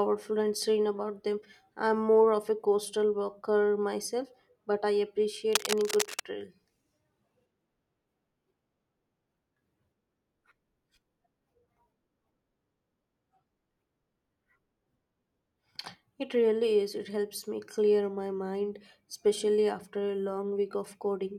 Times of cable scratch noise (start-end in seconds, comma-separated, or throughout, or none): 5.53-6.23